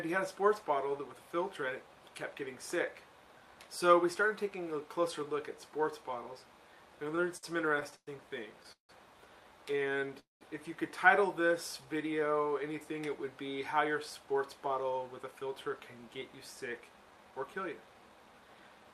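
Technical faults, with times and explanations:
7.15 to 8.91 s, repeated stalls (stutter): The sound keeps catching and restarting, about eleven times in under two seconds. Each break is short, the longest about 0.17 s, and together they fill about a quarter of that stretch. Packets were arriving late, so the jitter buffer kept running dry. Each time, the receiver stretched the last sound to bridge the wait, fading it on the longer breaks. Nothing is lost, but the passage drags and jerks.
9.71 to 10.08 s and 11.41 to 12.34 s, jitter buffer slow-down: In both stretches the sound runs slower while the pitch stays the same. The first runs at about 90% speed and gains 43 ms. The second runs at about 92% and gains 85 ms. The receiver was rebuilding its reserve. It did this by repeating single pitch periods or bits of pauses many times over, so sounds come out drawn out.
10.19 to 10.43 s, call audio freeze: The sound hangs and dies away into about 0.15 s of silence, then resumes where it stopped. 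The whole hold lasts about 0.21 s and nothing is lost. The cause is likely a packet delay that emptied the jitter buffer. The receiver carried the last sound on briefly and then went quiet while it waited. When the audio resumed, it was running about 0.21 s later than before.
14.19 to 18.92 s, jitter buffer speed-up: Through the final stretch the sound runs faster at an unchanged pitch, about 7% quick, and it feels hurried. About 0.4 s is cut in total. The buffer held more audio than it aimed for. To bring the delay back down, the receiver repeatedly removed pieces one or a few pitch periods long.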